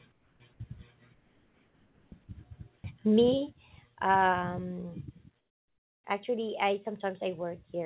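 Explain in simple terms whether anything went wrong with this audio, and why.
In the pauses at 0.12–0.4 s, 1.14–2.12 s, 2.76–2.84 s and 5.38–6.04 s, the real background is swapped for a flat, featureless hiss, mostly quieter. This is comfort noise in place of the background, likely from the sender going silent between phrases and the receiver filling in.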